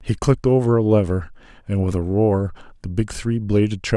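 No technical faults can be heard in this speech recording.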